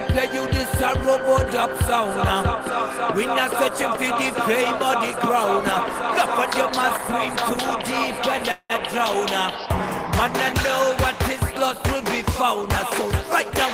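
Call audio freeze at 8.51–8.72 s: the sound stretches into a fading buzz, then briefly drops silent, likely from delayed packets draining the jitter buffer, pushing later audio back.

Doubled audio track from 12.72 s to the end: an abrupt, full-band copy about 10 dB quieter trails by roughly 0.4 s, likely from a second, slower capture path.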